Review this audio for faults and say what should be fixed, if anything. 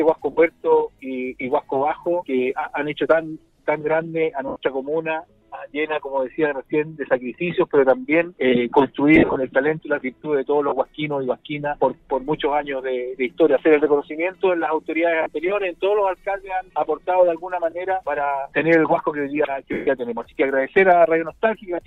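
Lost LE Audio frames cause short dropouts at 0.32, 4.48 to 4.56, 9.16 to 9.36, 10.69, 15.22 to 15.26 and 19.73 to 19.87 seconds. The longest gaps run about 80 to 150 ms. At 9.16 the losses come in bursts spread over 200 ms, with the longest run around 50 ms. In each gap the decoder replays the last spectrum with scrambled phase. Tones smear into noise. The longer gaps fade toward silence. Improving the Bluetooth link margin or adding retransmission headroom would prevent these losses.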